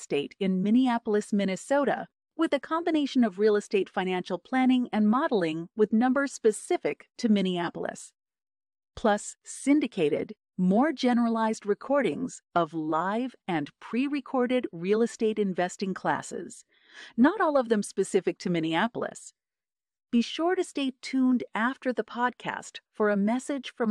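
No technical faults are audible anywhere in the speech recording.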